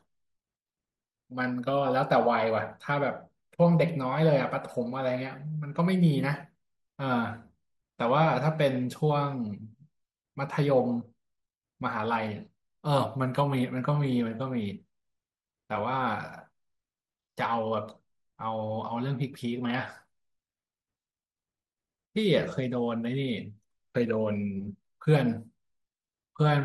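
The speech has most likely been squeezed through MPEG Layer II (MP2) compression at a low bitrate, with damage that fits a rate of around 80 kbps, running for the full length of the clip. With too few bits to share across its 32 sub-bands, the encoder shuts off the upper bands and quantises the rest coarsely, so the speech sounds dull and muffled, with a gurgling, granular roughness as high-frequency bands flicker in and out.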